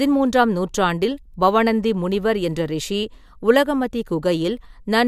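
No technical faults occur at any point in this recording.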